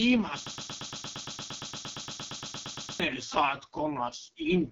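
A short speech recording carries AMR wideband (HD Voice) codec damage from start to finish. The band stops at about 7.4 kHz, and the whole signal is harsh and raspy. That grainy, buzzy roughness fits the lowest 6.6 kbit/s mode. It differs from a narrowband phone codec, which would cut off near 3.4 kHz and sound muffled rather than rasping, and from MP3-style artefacts, which swirl and warble instead of grating. From 0.46 s to 3.00 s there is a broken-record loop: a 115 ms fragment repeats identically, back to back, for about 2.5 s, and the audio that belonged in that span never plays. This is likely a stalled player or stream resending its last buffer. The exact sameness of each repeat and the missing content set it apart from jitter-buffer stutter or packet-loss concealment, which vary from one repeat to the next and let the audio move on.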